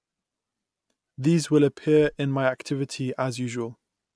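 Nothing goes wrong anywhere in this bit of speech, so there's no fault to point to at any moment.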